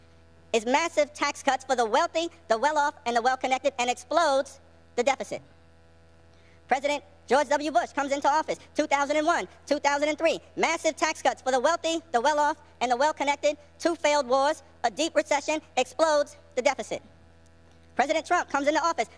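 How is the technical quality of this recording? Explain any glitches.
The whole clip runs too fast and too high, a wrong sample rate problem. It plays about 1.38 times quicker and roughly 5.5 semitones sharp, which fits material captured at 16 kHz being played back at 22 kHz with no conversion, so speed and pitch rise together throughout.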